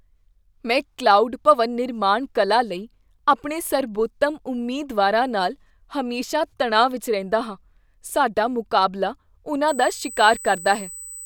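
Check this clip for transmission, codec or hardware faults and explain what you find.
One hardware fault turns up: USB whine near the end. From 9.68 s, just after "ਰਹਿੰਦਾ ਹਾਂ ਸਾਡਾ ਮੁਕਾਬਲਾ", to the end, a thin, fixed 8 kHz whine sits roughly 15 dB below the speech. Current drawn in 125-microsecond USB microframes leaks in through power or ground. On a spectrogram it is a flat line at 8 kHz.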